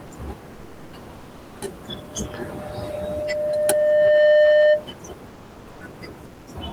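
Comfort noise in place of the background appears in four pauses of this speech clip: 0.53 to 0.93 s, 1.15 to 1.61 s, 5.27 to 5.81 s and 6.25 to 6.47 s. In each gap the real room noise, which sits about 37 dB below the speech, gives way to a smooth, featureless hiss that is about 2, 3, 4 and 7 dB quieter respectively. The likely cause is discontinuous transmission of the kind Opus DTX performs: the sender goes silent when no speech is detected, and the receiver synthesises a rough stand-in for the background until sound resumes. A loudspeaker feedback squeal runs from 1.87 to 4.88 s, a single tone at 603 Hz that swells over roughly two seconds to around 20 dB above the speech. At that frequency the microphone is picking up its own loudspeaker with a loop gain above one, so the tone keeps reinforcing itself until the loop is broken.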